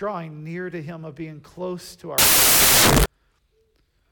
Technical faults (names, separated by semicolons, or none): samples built from the wrong bytes